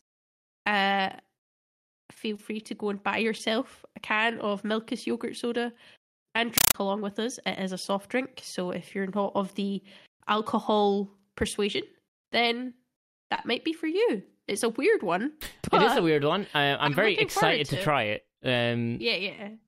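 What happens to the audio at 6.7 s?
From 6.58 to 6.74 s, just before "along with us", a compressed stream played as audio replaces the speech. Undecoded Dolby Digital data, which fits a 384 kbps AC-3 stream, sounds like loud chattering static. The waveform shows 8 ms bursts 31.25 times a second with near-silent gaps, and the spectrogram shows matching broadband vertical stripes.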